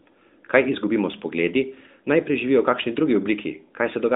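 No technical faults are audible.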